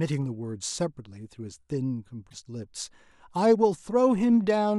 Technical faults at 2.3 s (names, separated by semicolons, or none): broken MP3 bit reservoir